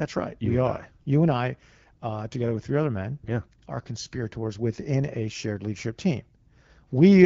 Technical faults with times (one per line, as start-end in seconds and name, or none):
none